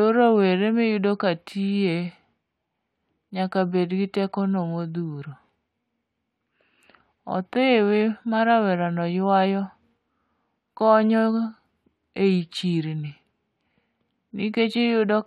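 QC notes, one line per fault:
No fault stood out on listening to this speech clip.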